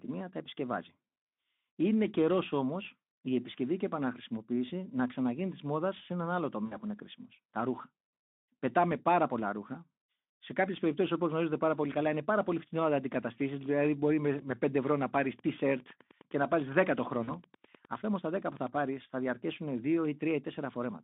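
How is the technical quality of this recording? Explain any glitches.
The recording has two kinds of glitch, brief dropouts and a patch of radio ticking, heard over narrowband Speex speech limited to about 200 Hz to 3.6 kHz with light codec roughness.

VoIP packet loss concealed by the speech codec: At 6.65 to 6.77 s, between "μόδα σε έναν άλλο" and "που είναι κρίσιμο", the speech smears into a fading buzzy tone for about 60 ms, which fits three lost 20 ms frames. Shorter smears occur at 14.37 to 14.43 s, after "μπορεί με", and at 17.24 to 17.31 s. In each, the decoder extended its last pitch and filter while lowering the gain.

Wi-Fi interference: From 15.31 to 18.80 s, just after "ευρώ να πάρει", a faint, steady ticking sits well below the speech, about ten ticks per second. Its 102.4 ms spacing matches a nearby Wi-Fi beacon, whose radio bursts the audio circuitry rectified into clicks.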